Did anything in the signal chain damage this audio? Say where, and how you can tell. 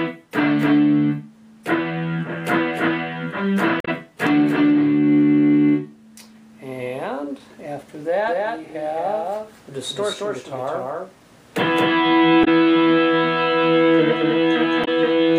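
Yes, two things. First, damaged data in the compressed stream, at the codec or storage stage. There are three short glitches, at 3.80 to 3.88 s, 12.41 to 12.48 s and 14.81 to 14.88 s, each lasting about 70 to 80 ms. That's the decoder hitting corrupted bytes, throwing out or misreading those frames, and stumbling forward until it finds the next valid frame header.

Second, a doubled audio track. From 8.28 s to the end, a full-band copy of the sound sits about a fifth of a second behind the original at roughly the same level. It has no decay or room colour, and it comes in abruptly at 8.28 s. A clean, flat repeat like that isn't acoustic. It's likely a second capture path or an edit layering two out-of-step copies in the mix.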